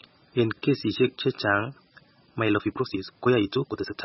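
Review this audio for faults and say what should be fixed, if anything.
Heavy MP3 compression runs throughout: the speech turns watery and swirly, which points to a bitrate of about 16 kbps. Encode at a higher bitrate, or keep an uncompressed master.

A time-stretched section runs from 2.33 s to the end. The pace jumps to about 1.74 times faster while the pitch stays put, sounding rushed, likely from dropped short segments. Avoid fitting speech to a fixed duration by stretching; edit or re-record it instead.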